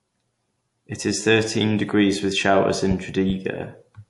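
From start to finish the speech sounds watery and swirly, with sibilants turning metallic and chirpy, and nothing at all above 11.2 kHz. This is plainly audible MP3 compression, likely at a low bitrate near 50 kbps. Short of bits, the encoder has cut the treble at a fixed point and dropped quiet frequency lines, which flicker in and out between frames and smear the edges of consonants.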